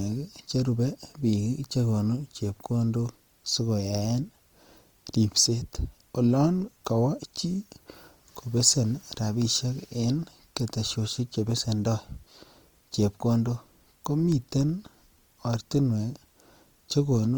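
The clip is speech, and it carries Opus compression damage from start to finish. The sound is grainy and rough, with a noisy sheen on tones rather than swirling, while the band still reaches about 20.4 kHz. The likely cause is music-mode encoding at a low bitrate, consistent with 24 kbps.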